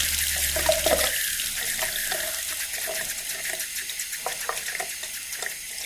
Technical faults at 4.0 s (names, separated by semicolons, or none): none